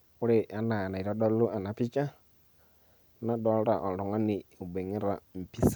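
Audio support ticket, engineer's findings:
No audible faults found on review of the speech clip. No component implicated.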